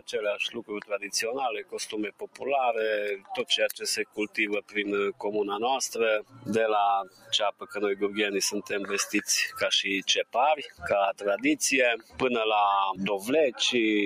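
Noise suppressor applied to music or sounds, throughout: a speech-tuned suppressor treats steady tones and tails as noise, so level swings by around 15 dB and the sound pumps and thins. Sound cut by the noise suppressor at 0.0–2.46 s, 3.16–3.45 s, 4.02–5.28 s, 6.2–6.49 s, 7.03–7.76 s, 10.24–11.23 s and 11.97–12.22 s: sustained passages sink by about 13 to 16 dB and their decays are clipped short, each dip lasting a few tenths of a second up to well over a second.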